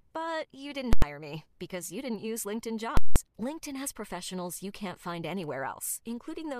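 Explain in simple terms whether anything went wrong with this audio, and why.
Yes, twice the speech hits invalid numbers at full scale, at 0.93 to 1.02 s and 2.97 to 3.16 s. A calculation broke, pinning the output at maximum, so at 2.97 s you hear a loud pop, dead silence, then another pop. A plain dropout would be silent without the pops.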